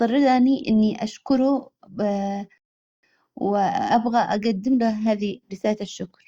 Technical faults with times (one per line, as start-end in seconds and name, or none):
2.58-3.03 rebuffering stall